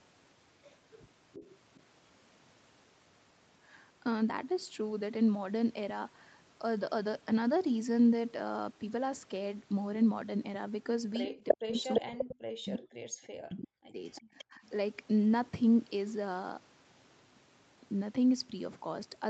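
At 1.33 to 1.82 s a faint copy of the speech returns 347 ms late, about 20 dB down. That is an echo leak, likely from a loudspeaker whose echo canceller let some of its microphone pickup through. Unlike reverberation, it is a distinct delayed repeat, not a smeared tail. The same 347 ms echo comes back at 11.48 to 12.31 s, here about 5 dB louder than the speech itself, then at 13.02 to 13.27 s, about 30 dB down, and at 14.15 to 14.69 s, about 20 dB down.

Overlapping that second stretch, from 11.26 to 12.84 s, the talker's own speech is pulled down by roughly 40 dB in pieces totalling about a second. This is speech suppressed in double talk: with both sides active, the canceller likely could not separate talker from echo and muted both. It happens again at 13.39 to 14.03 s, also near 40 dB, and briefly at 14.5 to 14.61 s, only about 10 dB. Unlike a dropout, these holes line up with the other side talking.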